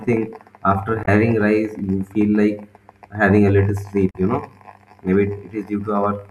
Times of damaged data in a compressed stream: 1.03-1.08, 4.09-4.16

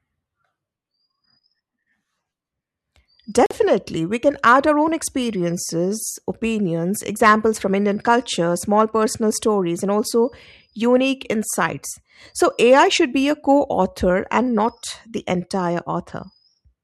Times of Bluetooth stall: 3.46-3.51

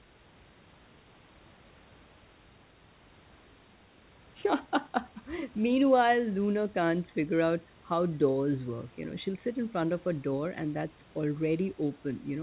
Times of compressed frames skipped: none

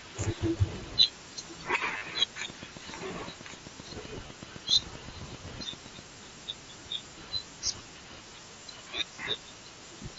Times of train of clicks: 2.50-6.00

